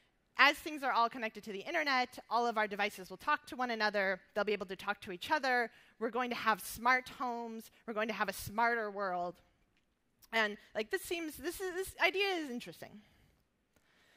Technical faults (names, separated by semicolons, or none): none